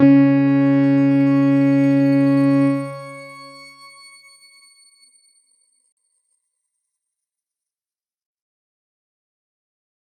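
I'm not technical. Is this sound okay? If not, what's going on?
No. There is a gap at a join of encoded pieces. At 5.92 seconds the sound drops out for about 47 milliseconds, then picks up where it left off at 5.97 seconds. The audio was likely saved in separate pieces, about 6 seconds each, then stuck together. Each piece kept a sliver of silence at its start and end. So the join leaves a tiny hole. The edges of the hole sound softened.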